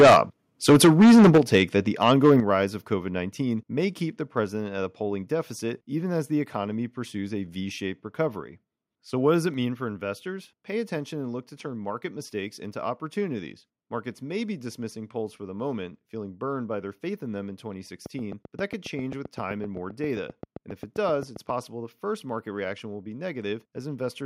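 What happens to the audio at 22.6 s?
Nothing goes wrong at 22.6 s; the audio is intact at that moment, with no dropout, click, distortion or other fault.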